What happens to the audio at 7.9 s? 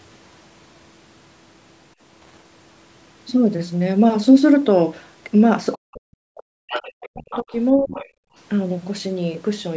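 Around 7.9 s the speech drops sharply, by roughly 20 dB at its deepest, between 7.76 and 8.03 s, with the affected stretch lasting about a third of a second. This is speech suppressed in double talk. It is likely caused by the echo canceller meeting both ends talking at once: unable to tell the local talker from the loudspeaker echo, it attenuates everything it picks up, so the talker's level collapses briefly instead of staying steady.

Overlapping that dip, from 7.94 to 8.08 s, a second voice is faintly audible, around 20 dB below the main speech. This is the other side's voice leaking through: the far end, played on the talker's loudspeaker, likely reaches the microphone and is not fully cancelled. It comes through as a short scrap under the suppressed speech, band-limited like the rest of the call audio, with nothing above 8 kHz.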